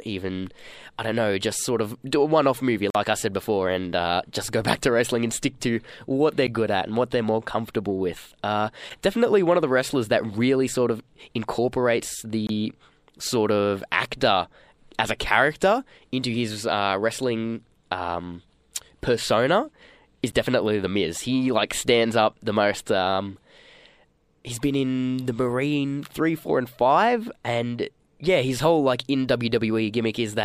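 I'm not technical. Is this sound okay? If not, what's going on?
No. There is a block of digital silence: the speech cuts to total silence for a split second, then snaps back. This happens at 2.90 s (the longest, about 46 ms), 6.47 s, 8.90 s, 12.47 s and 20.32 s. Gaps like these appear when the playing program fails to hand over the next chunk of sound in time.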